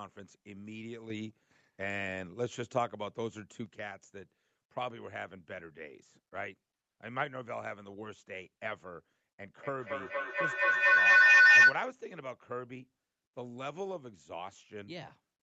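From 1.1 s to 3.66 s, a sudden gain jump lifts everything by about 6 dB, background noise included, then drops back. This is likely digital gain applied without a ramp. On the waveform, the envelope and the noise floor both step up and then down together.

From 9.63 s to 11.89 s, feedback howl builds: a narrow tone near 2 kHz grows to about 18 dB above the speech, pulsing roughly every fifth of a second. A microphone is picking up a loudspeaker on the same call, and each trip around that loop adds level. The spectrogram shows a bright horizontal line, well inside the 8 kHz band of the call audio. The waveform shows swelling periodic bursts.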